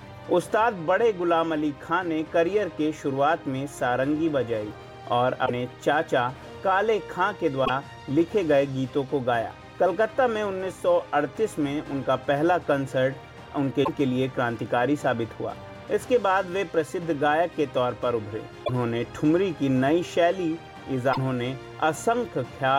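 Five short glitches turn up at 5.42 to 5.51 s, 7.62 to 7.70 s, 13.81 to 13.89 s, 18.61 to 18.70 s and 21.10 to 21.18 s. Each is damaged data in the compressed stream: the decoder trips over corrupted frames and loses sync, leaving a brief glitch of about 80 ms.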